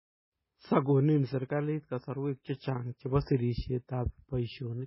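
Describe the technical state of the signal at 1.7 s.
At 1.7 s the speech sounds watery and swirly, with nothing above 5.6 kHz. The damage runs through the whole clip. The likely cause is heavy MP3 compression at a very low bitrate, around 16 kbps, so the encoder discards the treble and drops weak frequency lines that flicker frame to frame.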